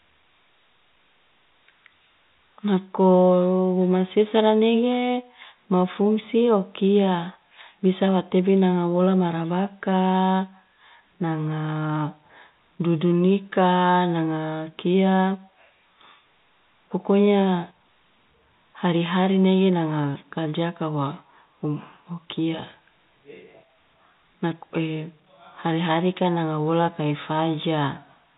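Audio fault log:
No faults logged; the speech sits within the band of G.711 telephone coding, with nothing above 4 kHz, as that path gives.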